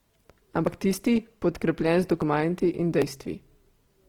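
Across the whole clip the speech has a grainy, rough texture, while the full bandwidth stays open up to about 20.2 kHz. This is likely Opus compression in its music (CELT) mode. Starved of bits at what sounds like around 16 kbps, the encoder keeps each band's energy but refills the detail with folded or noise-like content, so tone gives way to grit rather than hollow swirls.

At 0.67 s, 2.22 s and 3.02 s the sound abruptly skips forward, and there is no gap of silence. Each is a dropped buffer (overrun), likely caused by the recording program failing to fetch its samples before the hardware overwrote them. A chunk of roughly 40 ms vanishes each time, and the audio on either side is spliced straight together, so the speech jumps at each point.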